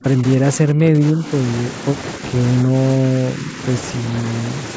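From the start to 1.32 s the speech dips in and out, sinking by up to about 10 dB for roughly two-thirds of a second in total. It happens again, more gently at about 5 dB, from 2.64 to 2.74 s and from 2.98 to 3.59 s. That pattern points to speech suppressed in double talk, likely because the echo canceller mistook this talker for loudspeaker echo while the far side was talking and turned everything down. The band-limiting to 8 kHz comes from the call path itself.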